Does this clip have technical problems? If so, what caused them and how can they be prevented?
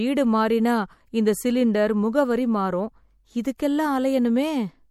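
Yes. Throughout the speech, the damage points to MP3 compression as the likely cause, at a rate that fits a low bitrate of around 64 kbps. With too few bits to go round, the encoder drops frequency lines it judges unimportant, and those lines flicker in and out between frames, giving the speech a plainly audible watery, swirling texture with chirpy s sounds and softened onsets. Nothing remains above 19.9 kHz. Encoding at a higher bitrate, or keeping a lossless copy, would prevent this.

Pre-echo appears from 3.57 to 3.59 s. The codec spreads its quantisation noise across a whole transform block, so when a sharp onset lands late in that block, noise meant to hide under the loud sound spills into the quiet moment just before it. Here that shows up as a brief hiss of about 20 ms ahead of the attack, which blunts its edge. A higher bitrate or a codec with finer block switching would avoid it.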